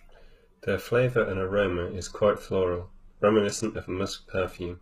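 From 1.11 s until the end of the clip, the speech suddenly loses its treble, with nothing above 12.3 kHz, and codec artefacts grow, with no gap at the change. This is an adaptive stream at a lower bitrate. The sound fits a switch to a low-bitrate HE-AAC version after the connection slowed.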